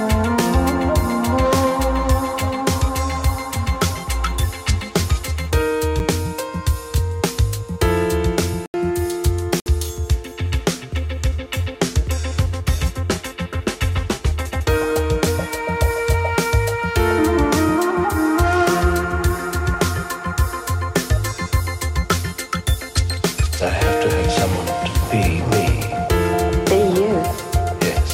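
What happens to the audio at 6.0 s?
Right around 5.99 s there's a block of digital silence, a gap of about 7.4 ms where the samples simply drop out. The audio cuts out and comes back with no fade on either side. With a hole this short you hear it as a tick or dip rather than an audible gap.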